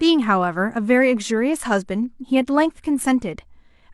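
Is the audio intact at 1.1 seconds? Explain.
Yes, the speech at 1.1 seconds is intact, with no fault to be heard at that moment.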